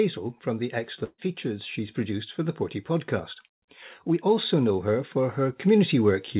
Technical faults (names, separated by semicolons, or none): burst of packet loss; automatic gain rising